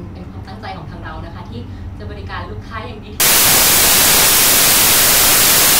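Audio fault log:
3.2–5.8 s, samples built from the wrong bytes: from 3.2 s to the end, each sample is assembled from misordered or misaligned bytes, so the jittery low bits dominate and the speech turns into loud, harsh broadband noise. The spectrogram fills with flat broadband energy, and the waveform becomes a dense block.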